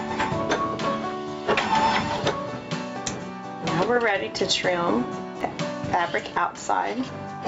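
Throughout the audio the level swings by around 15 dB, flattening loud and soft passages together. This is gain pumping, likely from input gain set far too high with a fast limiter clamping it. Unlike a noise gate, pumping does not cut the background to silence. At 2.18 s and 5.41 s there are tiny clicks. These are repeated buffers: a 1.33 ms slice, which fits a 64-sample buffer, plays twice and then three times with hard joins. Unlike a dropout, no gap opens. The call path's band limit, with nothing above 8 kHz, can also be heard.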